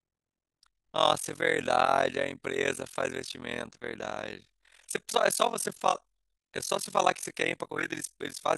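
Speech runs with overlap-add ripple from start to finish: frames were rejoined with an overlap that does not sum evenly, so the level dips by about 60 dB around 40 times a second, a rough, fast flutter. The waveform shows a regular comb of near-silent gaps, and the spectrogram shows evenly spaced vertical stripes.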